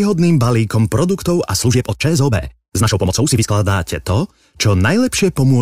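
From 1.56 s to 3.52 s the speech suddenly races ahead, running at about 1.81 times its normal pace while the pitch stays exactly where it was, so the passage sounds rushed before the delivery drops back to its ordinary rate. This time-stretched section was likely squeezed by software to fit a shorter slot, keeping pitch steady by discarding short slices of the audio, which is what gives it that hurried texture.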